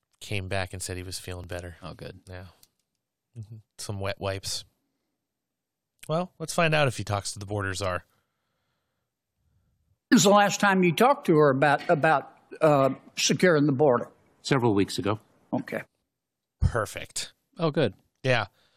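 At 1.44 s the speech jumps with a tiny skip, an overlap between stream segments that fits 4-second segments. A few milliseconds are cut away rather than replaced by silence, unlike a dropout.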